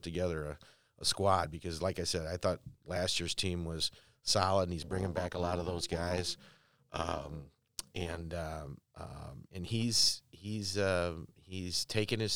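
From 4.82 s, right after "was solid and he's", until 8.21 s, where "um um and he's" follows, the speech carries an overlap-add ripple. The frames were rejoined with windows whose overlap does not sum to a steady gain, so the level dips by about 11 dB once per frame, around 300 times a second. Unlike a slow tremolo or dropouts, this modulation is too fast to hear as pulsing and comes across as a rough, robotic buzz on the voice.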